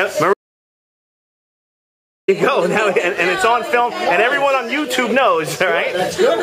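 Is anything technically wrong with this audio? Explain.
Yes. From 0.34 s to 2.28 s there is an audio dropout to silence: the sound cuts off mid-flow and returns abruptly about 1.95 s later. The input was most likely lost, through a disconnect, a link failure or an accidental mute, while recording continued and wrote silence. Unlike a natural pause or a noise gate closing, the gap has no room tone and no fade at either edge, and whatever occurred during it is gone.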